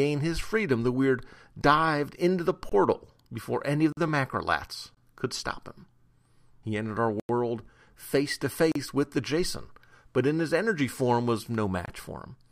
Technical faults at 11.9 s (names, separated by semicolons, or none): block of digital silence